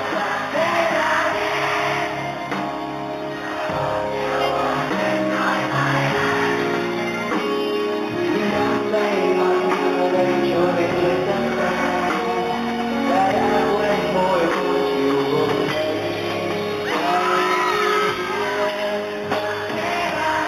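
Throughout, there's imaging from linear upsampling: crude 8 kHz to 44.1 kHz interpolation dulls the top and leaves faint 4 to 8 kHz mirror images, a light metallic shimmer.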